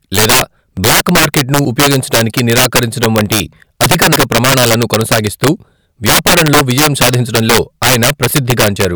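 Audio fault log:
Throughout, integer overflow: speech peaks driven about 12 dB too hot wrap to the opposite sign. A few percent of samples flip, causing violent cracks.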